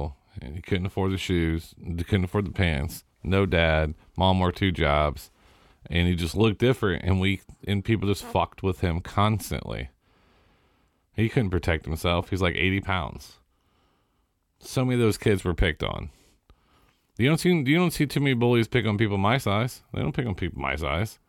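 No technical faults can be heard anywhere in the recording.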